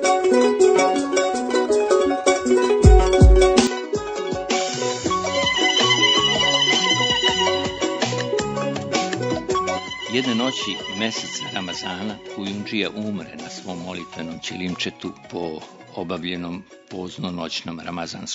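At 3.67 s the sound abruptly loses its top end, with nothing above 7.6 kHz, drops about 10 dB in level, and gains a faint new background noise, with no gap at the change. This likely reflects the input switching to a poorer device, which persists to the end.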